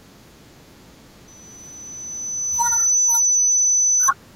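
From 1.27 s to 4.11 s the speech carries a loudspeaker feedback squeal. A microphone hears its own loudspeaker, and the loop gain passes one at 6 kHz. That tone swells over roughly a second and a half. It ends up far above the speech.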